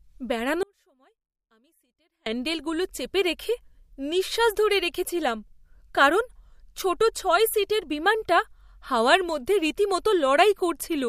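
At 0.63 s the speech cuts abruptly to a faint residue, roughly 35 dB down, until it snaps back at 2.26 s: an audio dropout to a faint residue lasting 1.63 s, likely a lost connection upstream of a still-live path. The hard edges set it apart from a pause or fade.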